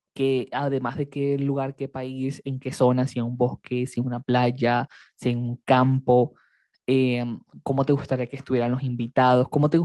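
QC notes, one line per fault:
0.64–5.65 s, automatic gain rising: the automatic gain control judged the incoming level too low and pushed its gain upward slowly, by about 6 dB over roughly five seconds. Because the boost is applied to the whole signal rather than to the speech alone, the voice and the background noise floor swell together, so the room seems to creep closer and the background grows along with the talker instead of the speech simply getting clearer.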